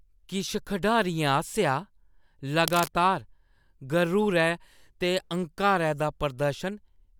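From 2.67 to 2.89 s a burst of cable scratch noise rasps over the speech, sitting roughly 10 dB below it. The likely cause is a worn lead or connector being moved. Its dense, uneven rustle, rather than one isolated click, marks it apart.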